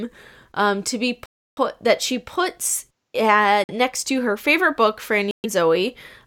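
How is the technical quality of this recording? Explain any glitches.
The speech gets interrupted by three short dropouts that look like a Bluetooth stall, most likely. The first runs from 1.26 to 1.58 s, right after "um to be", with about 313 ms of dead air; the second is a brief 49 ms gap at 3.64 to 3.71 s before "uh next to her"; the third sits at 5.31 to 5.46 s after "to her favorite book", about 129 ms. Each time the audio just drops to silence and then carries on, which is what you get when interference delays packets, the headphones' buffer empties, and playback waits for the resends to land.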